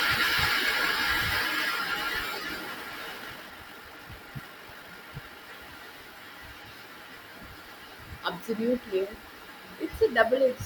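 A speech clip with a time-stretched section from 3.16 s to 5.44 s, where the pace abruptly doubles and the audio turns rushed. The pitch stays where it was, which separates it from a simple playback-speed change, where running twice as fast would push everything up an octave. The likely cause is software squeezing that stretch to fit a shorter length, dropping short slices of the sound to hold the pitch steady.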